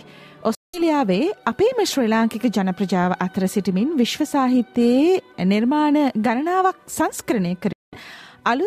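At 0.55 s the sound cuts abruptly to silence and returns at 0.82 s, and the same thing happens again from 7.72 s to 7.99 s. These gaps are most likely Bluetooth dropouts, where packets failed to reach the headphones in time and were discarded. Unlike a buffer stall, which pauses and then continues from the same point, the sound here comes back further along, as if it had kept playing through the hole.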